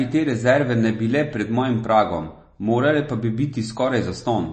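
Throughout the speech, MP3 compression likely starved the encoder of bits, at a rate fitting about 32 kbps. Everything above 8.3 kHz is cut, and weak frequency lines flicker between frames, leaving the speech dull and plainly watery and swirly.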